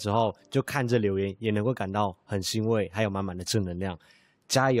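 Speech recording with no technical faults anywhere in the signal.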